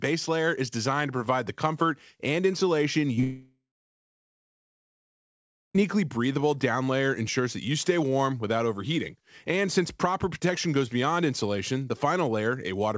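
At 3.16 s and again from 3.20 to 3.24 s there is short concealed packet loss: about 10 ms and then about 30 ms of the call arrived too late. The receiver extended the preceding sound to cover each gap, so you hear a brief smear or wobble, which distinguishes these from a true dropout.

From 3.24 to 5.79 s comes a long network dropout, likely a stall in the network link. The concealment first stretches the last sound into a fading buzz for roughly a third of a second, then leaves about 2.2 s of silence before the sound resumes. The missing stretch is simply gone. The span is far too long to pass as a momentary glitch. Throughout, the call codec's band-limit means nothing is heard above 8 kHz, which fits a wideband codec such as G.722.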